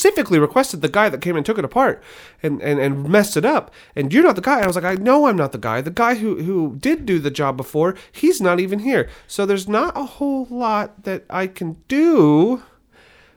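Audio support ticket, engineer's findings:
Processor overload crackle, 4.63 to 5.06 s, right before "I'm not the guy". Gritty tearing over the speech, then it clears. Likely the audio thread missing its deadlines: around ten tiny buffers, each under a millisecond, came out as dropped gaps of silence with hard edges. Classic CPU load spike in the processing chain. Worth checking what else was running on that box at the time.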